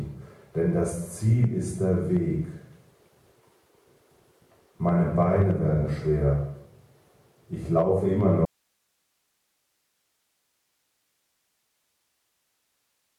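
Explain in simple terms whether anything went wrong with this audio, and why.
At 8.45 seconds the sound cuts out abruptly and never returns; only a faint hiss remains to the end. This is an audio dropout to a faint residue, likely a lost signal with the line still live. A pause or fade would not switch off so suddenly and leave hiss.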